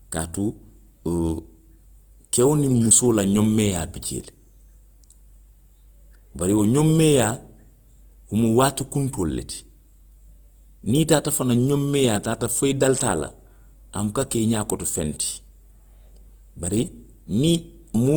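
The speech was likely squeezed by Opus compression in music mode at a rate fitting 24 kbps; noise-filled bands leave it rough and grainy throughout.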